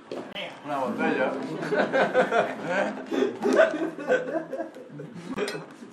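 A recording of sounds with two short holes of true silence, from about 0.33 to 0.36 s and from 5.34 to 5.38 s, each roughly 40 ms long, which points to a single compressed frame each time. This is a corrupt frame muted: damaged bits made the decoder reject the frame, and the player substituted silence. It differs from concealment, which fills the gap with smeared sound, and from a dropout that skips ahead, because here the sound cuts off abruptly and resumes on time.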